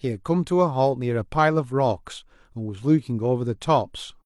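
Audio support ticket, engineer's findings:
No audible faults found.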